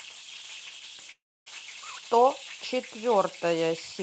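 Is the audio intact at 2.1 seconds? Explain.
Yes, the speech at 2.1 seconds is intact, with no dropout, glitch or other fault at that moment, only the ordinary band-limited character of the call codec it passed through.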